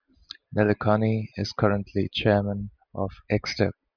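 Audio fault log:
No faults detected in the speech recording; nothing to log.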